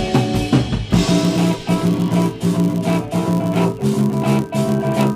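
From 0.91 s to the end, a filter restarted on every block. It loses its state each time, so every block starts with a small transient, heard as a 100 Hz buzz.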